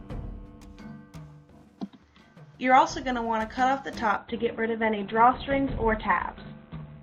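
At 4.17 s the audio switches suddenly to an adaptive stream at a lower bitrate, lasting to the end. There is no gap. Codec artefacts rise, and nothing remains above 4.3 kHz. The sound fits a drop from 64 to 12 kbit/s.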